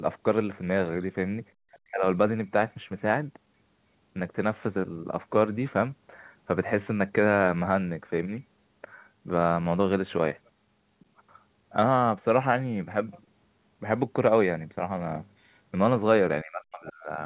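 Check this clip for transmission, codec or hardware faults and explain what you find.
Two echo-canceller faults show up in the speech, each twice, all within a telephone band that stops at 4 kHz, as G.711 would give.

Other side's voice leaking through, at 1.74–1.79 s and 10.99–11.05 s: brief scraps of a second voice, about 30 and 35 dB below the talker, likely loudspeaker echo the canceller missed. On a spectrogram they appear as faint, short harmonic smears beside the main speech.

Speech suppressed in double talk, at 1.82–2.05 s and 16.42–17.1 s: the talker's level plunges by up to around 40 dB for roughly a fifth of a second, then most of a second, likely because the canceller muted both voices during overlap. The waveform shows abrupt envelope holes; the spectrogram shows blanked columns.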